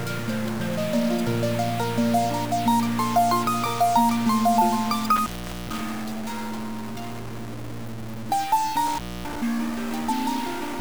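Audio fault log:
Throughout: stuck bit. A harsh, buzzy distortion rides on the whole signal, and quiet stretches fill with a grainy noise floor rather than falling silent. This is most likely one data bit held at a fixed state in the converter or data path. Roughly half the samples are pushed off by that bit's weight, a step of about -30 dBFS. The error pattern follows the waveform, and near zero it flips with the sign of small values, so pauses carry noise.
5.16–5.81 s and 8.87–9.36 s: intermittent contact. The audio drops out twice, each time with crackle at the start and end of the gap, as a loose cable or plug briefly opens and recloses. The first break holds open for about 0.45 s and the second for about 0.26 s. While the line is open, only faint hiss remains. The crackle comes from the contact bouncing as it makes and breaks, which produces short irregular spikes on either side of each gap.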